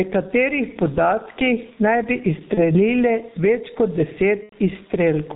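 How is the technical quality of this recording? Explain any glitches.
Technical quality is poor: the speech is heavily band-limited and coded throughout, its level pumps continuously, and it breaks up twice where packets went missing.

Gain pumping runs through the whole clip. The level swings by around 10 dB, so loud and quiet passages sit unnaturally close together. The likely cause is input gain set far too high, with a fast limiter or compressor clamping down on every peak. The room noise sits about 41 dB below the speech.

The G.723.1 codec damage is also constant and heavy. The speech is muffled, with nothing above 4 kHz, and has a hoarse, rough texture with smeared consonants. That fits a very low-rate telephony codec around 6.3 kbit/s working in coarse 30 ms frames with a slowly updated voice model.

VoIP packet loss concealed by the speech codec occurs at 2.54–2.74 s and 4.43–4.55 s. 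The decoder filled each gap by extending its last pitch and filter, fading the level. The sound is stretched into a fading buzzy tone or coloured noise, and the speech stays weak or distorted for a while after the audio returns. The first gap fits about 30 ms lost, and the second, longer one about 90 ms.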